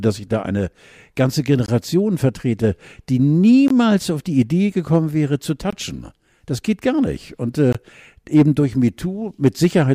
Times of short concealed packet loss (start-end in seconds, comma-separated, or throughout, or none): none